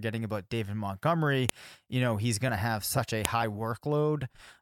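Separately saved pieces of this speech were joined without stripping their WAV headers, so those header bytes play as samples: a file header played as audio, heard as a sharp, loud snap at 1.49 s and again at 3.25 s, right after "to have such a".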